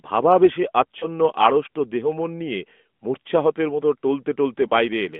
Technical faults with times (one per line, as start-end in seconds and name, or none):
1.00-1.07 lost AMR speech frames
4.68-4.73 lost AMR speech frames